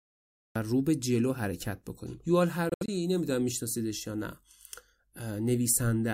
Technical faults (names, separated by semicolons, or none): cut-off start; Bluetooth dropout